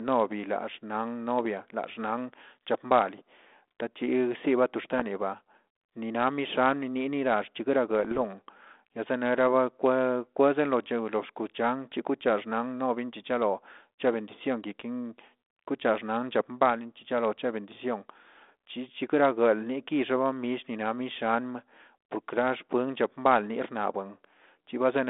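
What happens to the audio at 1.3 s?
Nothing goes wrong at 1.3 s: the speech there carries on intact, with only the narrow telephone band of the 32 kbit/s G.726 line.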